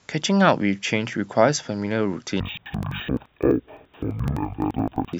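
Interleaved audio read as planar from 2.40 s to the end: each 85 ms block is split into halves played at half speed, dropping the speech an octave, doubled and choppy at 11.7 Hz.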